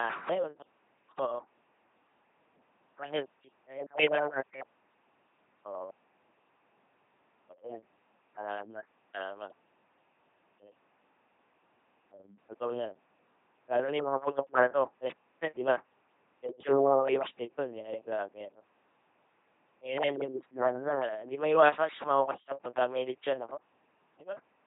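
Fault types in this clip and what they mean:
LPC-10 vocoder: The whole clip has that flat, buzzy robot quality you get when speech is rebuilt from a handful of filter settings plus either a pulse buzz or plain hiss, with nothing in between. Voiced stretches come out mechanical and droning, some sounds flip to the wrong excitation as stray buzz or hiss, and nothing survives above 3.8 kHz. It's heavy damage, which fits a 2.4 kbit/s LPC-10 coder.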